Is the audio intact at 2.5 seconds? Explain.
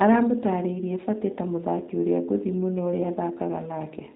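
No. G.729 codec damage runs through the whole clip, including 2.5 s. Speech is rebuilt from a filter, pitch and pulses, consistent with 8 kbit/s. It sounds rough, synthetic, with nothing above 4 kHz.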